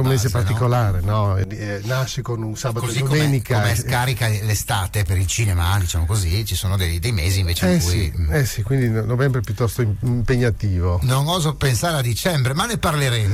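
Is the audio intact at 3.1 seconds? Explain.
No. At 3.1 seconds the sound still has channel delay (comb filtering), which runs from 1.44 to 3.13 s. One channel lags the other by roughly 5 ms before the mix to mono. Shared content cancels at evenly spaced notches from around 100 Hz upward. It sounds hollow and phasey.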